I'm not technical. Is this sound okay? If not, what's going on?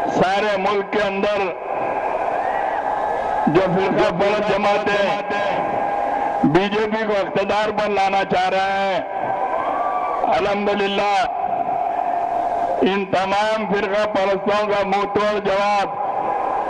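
No. From 3.41 to 5.65 seconds there is a doubled audio track: the sound was most likely picked up a second time through a slower route, or an edit left two copies out of step. You hear the same sound again about 0.4 seconds behind, a little quieter but just as clear and full, with no fading tail. The late copy switches on and off abruptly at those two times.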